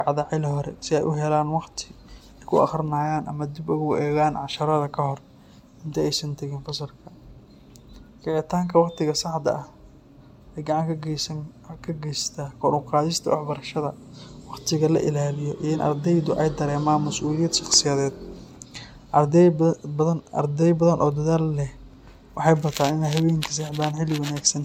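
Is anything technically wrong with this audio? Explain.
Yes. The speech shows generation loss from start to end. It sounds swirly and hollow, with a smeared, watery texture. Consonant attacks are blurred rather than crisp. The damage is heavier than a single lossy pass would leave. The likely cause is repeated MP3 coding, with the audio decoded and re-encoded about four times at a rate consistent with 96 kbit/s. Each pass quantises again on a shifted frame grid. Noise and spectral gaps pile up.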